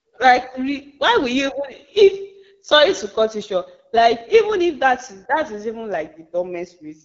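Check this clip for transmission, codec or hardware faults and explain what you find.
One fault runs throughout the speech: AMR wideband (HD Voice) codec damage. Speech is modelled as pulses through a vocal tract filter up to 6.4 kHz, with shaped noise above, ending near 6.9 kHz. Plainly rough and raspy, which fits the 8.85 kbit/s mode. Narrowband AMR would cut near 3.4 kHz instead.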